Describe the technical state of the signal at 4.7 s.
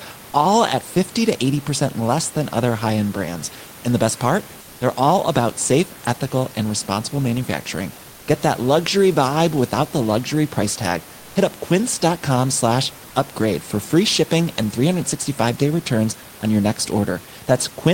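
At 4.7 s you're inside a short stretch of comfort noise in place of the background, from 4.61 to 4.81 s. For those 200 ms the real room noise drops out and a flat, featureless hiss, about 1 dB quieter, fills the gap, likely from Opus DTX pausing transmission between speech.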